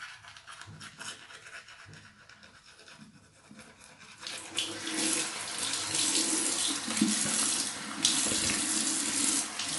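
From start to finish, the audio carries plainly audible MP3 compression damage. Nothing is left above about 11.3 kHz, so the top end sounds dull and cut off. Faint detail flickers in and out, which gives a watery, swirling texture. Bright, noisy parts turn metallic and chirpy, and sharp attacks blur. The likely cause is an encoder starved of bits, dropping quiet frequency lines frame by frame, which fits a bitrate of about 46 kbps.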